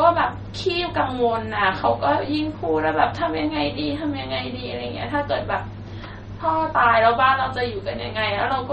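MP3 compression damage runs throughout this speech clip: nothing sounds above about 8.3 kHz, and the swirly, watery texture is plainly audible, likely from an MP3 encoder starved at around 32 kbps.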